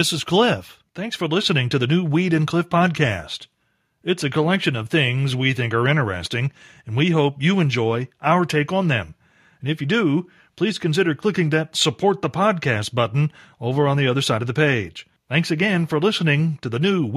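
No technical faults are audible anywhere in the recording.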